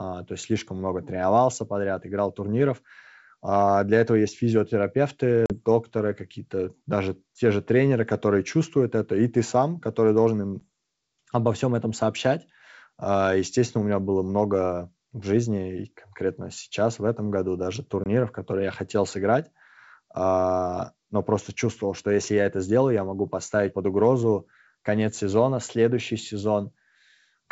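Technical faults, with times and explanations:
5.46 to 5.53 s, 10.60 to 10.62 s and 18.04 to 18.06 s, packet loss on an ADPCM call. The speech drops into hard-edged silences of about 40, 10 and 20 ms, matching a few packets, one packet and a couple of packets lost. The receiving ADPCM decoder's predictor and step size then no longer match the sender's. So after each gap the speech returns slightly distorted. This settles over some tens of milliseconds, over the clear wideband G.722 speech.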